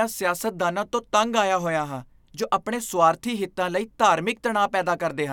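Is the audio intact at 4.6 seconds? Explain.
Yes, at 4.6 seconds the speech plays through intact, with no dropout, click, distortion or other fault to be heard at that point.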